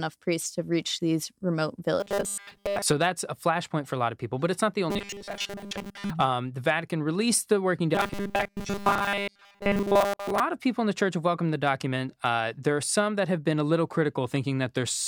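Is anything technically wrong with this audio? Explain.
Yes. Robotic sound from repeated short buffers occurs three times: 2.00 to 2.82 s, after "to reach these remote" and before "so that's a flashpoint"; 4.90 to 6.11 s, after "but it's not the"; and 7.95 to 10.40 s, after "released the working" and before "of people in the". The speech becomes a rigid metallic buzz at 200 Hz that loosely tracks the words. The likely cause is a starved audio feed, with software looping the last 5 ms segment in place of most of the missing audio.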